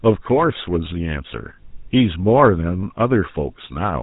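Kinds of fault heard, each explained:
GSM full-rate codec: the voice is rebuilt from a vocal-tract model driven by sparse, regularly spaced pulses, giving a plainly audible buzzy, gravelly roughness throughout, which fits a 13 kbps GSM stream. A spectrogram shows nothing above 3.8 kHz and grainy, smeared harmonics.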